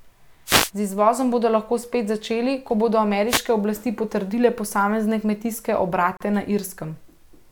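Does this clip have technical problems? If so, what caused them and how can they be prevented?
Yes. The radio link of an analogue FM wireless microphone faded twice as reflected signals cancelled the direct one. Receiver noise then rose over the speech as a short swish of static, first from 0.45 to 0.71 s and again from 3.28 to 3.44 s, between "spet začeli ko bodo" and "oblasti potrdile posamezne kmetijske". These are wireless microphone noise hits. Placing the receiver antennas apart for diversity, keeping line of sight and shortening the distance prevents them.

Near the end, the audio had been encoded in separate pieces and joined without trimming. Each piece's encoder start-up delay and padded final frame stayed in. The result is a gap at a join of encoded pieces: a 36 ms gap opens at 6.17 s, just after "oblasti potrdile posamezne kmetijske", with smeared edges, and the speech then resumes where it broke off. 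Encoding the whole recording in one pass, or trimming the delay and padding with gapless metadata, prevents it.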